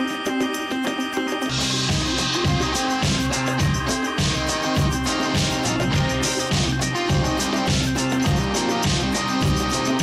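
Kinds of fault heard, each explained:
Skip ahead: at about 1.49 s playback jumps forward, and roughly a second of sound is simply missing. The material before and after is spliced together with no silence filled in, so the audio lurches ahead abruptly. On a waveform the envelope changes shape suddenly at that point with no flat gap. A spectrogram shows a hard vertical seam where the harmonic and energy patterns fail to continue, and the timing after the seam sits about a second earlier.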